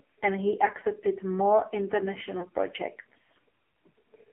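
Speech heard through the AMR narrowband mobile codec at heavy compression: the band stops near 250 Hz and 3.4 kHz, and the voice is buzzy and synthetic. That fits a low AMR-NB mode around 5.9 kbps, not a simple band-pass filter, which would narrow the sound without adding that vocoder roughness. From 2.40 to 2.47 s there is a brief dip or warble consistent with one lost AMR speech frame. Unlike a hard dropout, the gap is filled by the decoder repeating its last pitch and tract settings at falling gain, so there is no clean silence or click.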